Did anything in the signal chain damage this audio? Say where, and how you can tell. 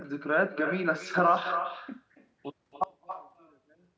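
Yes. Throughout the speech there is echo with no canceller, a call-processing and network problem. Each phrase is shadowed about a third of a second later by a copy roughly 9 dB quieter. On a spectrogram every syllable's harmonic stack reappears fainter and shifted right, and the waveform shows small ghost bursts trailing each burst. The far end's loudspeaker was picked up by its microphone and sent back uncancelled.

From 2.84 s to the end, the summed signal drops by about 30 dB. The likely cause is one channel inverted, such as a reversed pair in the analogue wiring, so the centred speech cancels in mono. The waveform collapses to a thin sliver there, and the spectrogram loses its strong low harmonics, leaving only a faint, thin residue of what differs between the channels. The call band's normal upper edge at 8 kHz stays visible.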